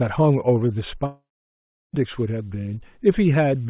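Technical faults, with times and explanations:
1.06–1.95 s, long network dropout: audio likely stopped arriving, so the last sound trails off as a fading buzz into silence, then resumes with that stretch lost.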